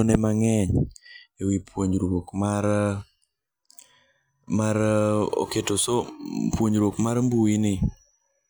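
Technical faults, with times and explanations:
6.93 s, dropped buffer (overrun): the speech jumps ahead, losing about 5 ms with no silence in between. Likely the hardware overwrote samples before the program collected them. The waveform shows an abrupt step, and the spectrogram a thin vertical broadband streak.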